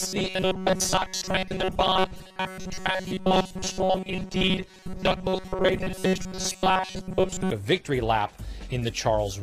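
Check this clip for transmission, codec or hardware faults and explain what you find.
One fault runs from 0.01 s to 7.50 s: robotic sound from repeated short buffers. Audio likely arrived too seldom, so the playback side kept looping a tiny fragment, about 5.3 ms, in place of most of the real signal. That loop imposes a fixed 188 Hz buzz, making the sound rigid and metallic while only loosely tracking its original shape.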